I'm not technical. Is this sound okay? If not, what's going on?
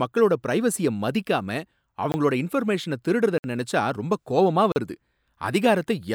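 No. The speech has three blocks of digital silence, where the sound drops out and comes back abruptly. They occur at 2.12 s for 20 ms, just before "இன்ஃபர்மேஷன திருடறத நினைச்சா ரொம்ப"; at 3.38 s for 60 ms, between "இன்ஃபர்மேஷன திருடறத" and "நினைச்சா ரொம்ப கோவமா வருது"; and at 4.72 s for 40 ms, right after "திருடறத நினைச்சா ரொம்ப கோவமா". This pattern points to the audio software not delivering sound in time.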